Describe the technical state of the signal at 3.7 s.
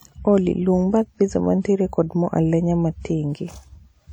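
At 3.7 s the speech rings and sounds washy, with a hiss that swells and fades with the signal, as it does across the whole clip. The likely cause is WMA compression, whose long transform blocks smear quantisation noise; the damage fits a bitrate around 48 kbps.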